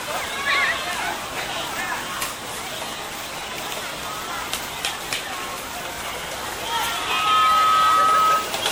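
Throughout, the sound has a swirly, smeared and hollow quality, with blurred attacks and a watery haze that seems worse than a single lossy encode would leave. This is generation loss. It is likely caused by the audio being decoded and re-encoded around seven times, which fits repeated MP3 passes at about 96 kbit/s. Each pass quantises on a shifted frame grid, so noise and spectral gaps pile up. Content still reaches about 20.2 kHz.

From 6.90 s to 8.56 s, a single steady tone at 1.3 kHz swells up over roughly 0.4 seconds into a squeal that sits about 10 dB above the rest of the sound. This is loudspeaker feedback squeal. A microphone picked up the loudspeaker it was feeding, and at 1.3 kHz the loop gain exceeded one, so that frequency kept reinforcing itself.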